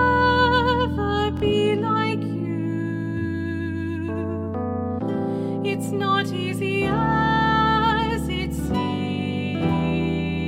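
At 1.37 to 1.42 s there is a Bluetooth stutter. Incoming audio data arrived late or not at all, so the receiver kept replaying its last buffered slice until fresh data came through. The brief repeat is heard as a short buzzing stutter. About 46 ms of the original audio is lost, which fits two dropped packets. Playback then picks up further along, as if the sound had kept running underneath the gap.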